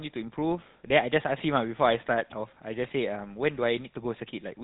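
From start to finish, the speech carries GSM full-rate codec damage. The vocal tract is modelled and driven by sparse, regularly spaced pulses. Nothing above 4 kHz survives. The result is a buzzy, gravelly roughness, plainly audible, which fits a 13 kbps GSM full-rate stream.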